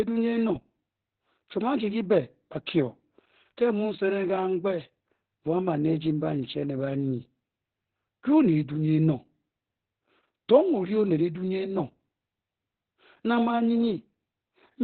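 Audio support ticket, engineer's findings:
Opus voice compression, whole clip, heavy. Speech coder in narrowband mode, with coarse, starved excitation coding consistent with roughly 8 kbps. Nothing above 4.3 kHz, so sibilants are lost and the speech sounds muffled, hoarse and slightly robotic, pointing to SILK.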